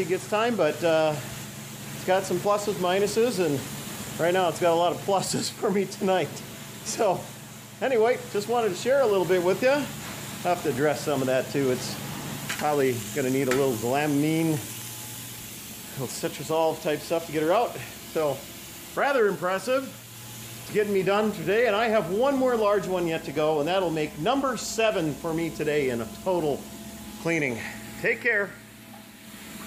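From 14.99 s to 16.65 s there is a block size mismatch (padded): one stage delivers blocks slightly shorter than the next stage reads, and the shortfall in each block is filled with zeros. Those brief silent gaps repeat at 43.1 Hz, heard as a low buzz riding on the sound. This rate fits a 1024-sample read block. The padding is small, so the slowdown is negligible (0.999x) and pitch stays normal.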